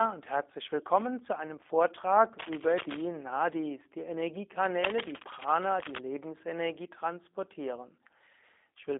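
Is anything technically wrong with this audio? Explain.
Yes. Throughout the speech, G.729 codec damage is plainly audible: the signal is rebuilt from a vocal-tract filter, a pitch predictor and sparse pulses, which fits an 8 kbit/s link. It sounds rough and faintly synthetic, carrying only 200 Hz to 3.6 kHz, with nothing above 3.7 kHz. A plain telephone band-limit would sound just as narrow but stay smooth.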